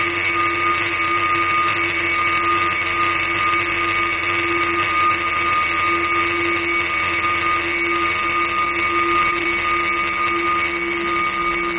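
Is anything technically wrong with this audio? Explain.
Yes, there are four short concealed packet losses, at 8.65, 9.31, 9.39 and 9.44 s, with the last three bunched within about 0.15 s. Each is roughly 10 ms of audio that didn't reach the decoder in time, so the receiver covered the gap by extending the preceding sound and then crossfading back into the real signal. You hear each one as a tiny smear or wobble, and a brief sound can drop out entirely. It all runs over a call path whose band tops out at 4 kHz, which points to G.711 mu-law at 64 kbps.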